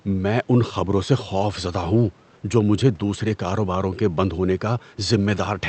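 Speech clip with no technical faults heard.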